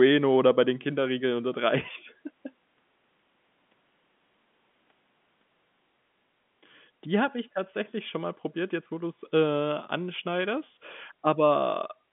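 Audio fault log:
The speech is carried over G.711 mu-law telephone coding at 64 kbps, which is working as intended: the audible band runs from about 150 Hz to 3.5 kHz with nothing above about 3.7 kHz, and the logarithmic coding adds at most a faint noise that follows the signal level.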